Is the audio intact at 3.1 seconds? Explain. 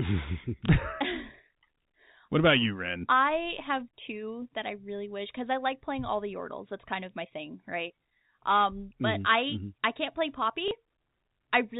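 Yes, at 3.1 s the speech is intact, carried only within the narrow band of G.711 telephone coding, with nothing above 4 kHz.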